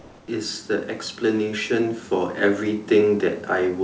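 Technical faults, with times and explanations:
0.00–0.28 s, comfort noise in place of the background: the opening background is a steady, featureless hiss about 2 dB quieter than the room tone that follows, without its texture. This is likely the receiver filling a transmission pause with synthetic noise shaped like the background.
0.66–2.92 s, automatic gain rising: the speech and the room noise beneath it swell together by about 4 dB over a little more than two seconds. Automatic gain control judged the input too quiet and raised its gain gradually, lifting everything by the same amount.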